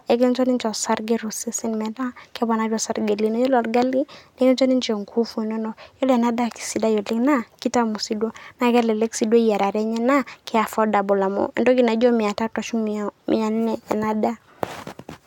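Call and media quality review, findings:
No faults found in this speech recording. Nothing in the audio points to a failing component on the call or media path.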